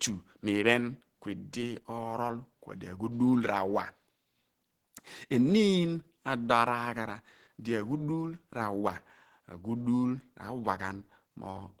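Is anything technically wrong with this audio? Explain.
Yes, the speech has plainly audible Opus compression running through the whole clip. It sounds muffled and hoarse, with rough, grainy edges, and that points to a starved bitrate, likely around 16 kbps, where the encoder falls back to its hybrid speech mode.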